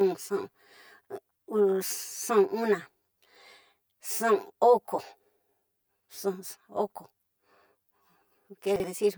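Throughout the speech there is channel delay (comb filtering): one channel trails the other by around 10 ms, and the mono sum cancels at evenly spaced frequencies from roughly 50 Hz upward. Unlike plain dullness from a low-pass filter, the hollow, phasey colour comes from fixed notches across the whole spectrum.

From 8.76 to 8.84 s, two 40 ms chunks are out of order, with the later one playing first. Nothing is missing, which sets it apart from a dropout. The result is a brief jumbled moment.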